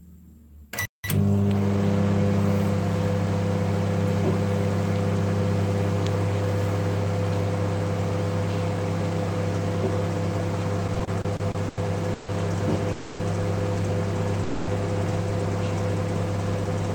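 A playback stall at 0.85 s cuts the sound off for about 190 ms, most likely because the player ran out of data, before it resumes at 1.04 s. Time-compressed catch-up follows from 1.04 to 1.78 s: the sound runs about 1.25 times fast at normal pitch, as small pieces are trimmed and cross-faded to clear the backlog. Repeated stalls (stutter) run from 10.87 to 12.30 s: nine late-packet gaps, the longest 150 ms, are bridged by stretching the previous sound, so the audio drags and stutters though nothing is lost. A call audio freeze at 12.92 to 13.21 s holds the last sound as a fading buzz or hiss for about 270 ms, likely from packets delayed in transit, then continues where it stopped. A second call audio freeze at 14.43 to 14.69 s fills about 240 ms the same way, likely from another transit delay, with no silence and nothing skipped.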